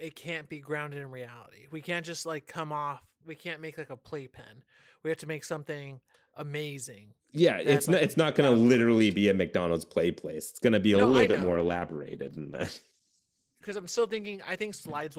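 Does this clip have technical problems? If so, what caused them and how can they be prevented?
Yes. A call bitrate drop hits right after "going to be a", at 10.95 s, and lasts to the end. The speech turns rough and muffled as the highs vanish, which fits the encoder falling from around 32 kbps to about 13 kbps, bottoming out for roughly 3 s. Prevent it with a steadier connection or a higher minimum bitrate.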